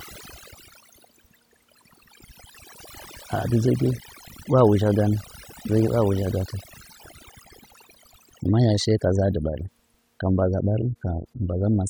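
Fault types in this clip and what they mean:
Overdone noise removal: Noise reduction was pushed too hard on a noisy speech recording. Frequency bands close to the noise level are cut deeply or removed. Throughout the clip, the background drops and breaks up into twinkling specks.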